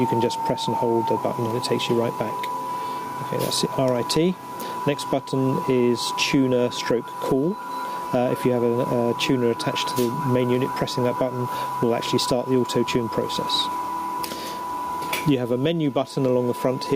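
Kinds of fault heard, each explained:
Gain pumping: throughout, level swings around 10 dB under loud sounds, likely excessive input gain driving a fast limiter.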